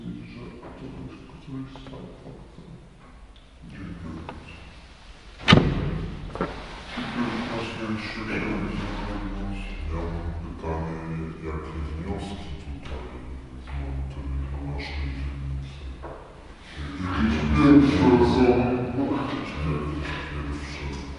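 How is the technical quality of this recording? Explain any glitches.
The recording has one fault that persists for its entire length. Throughout, a wrong sample rate makes everything play at 0.667 times normal speed and about 7 semitones lower, consistent with 48 kHz material played at 32 kHz. The audio sounds low and sluggish. A spectrogram shows every feature shifted down in frequency and stretched in time.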